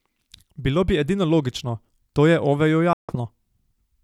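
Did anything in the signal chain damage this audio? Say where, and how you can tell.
Yes. The speech cuts to silence from 2.93 to 3.15 s, then resumes further along, as though it had kept playing. This is a Bluetooth dropout at the wireless playback stage, likely from late packets discarded before reaching the headphones.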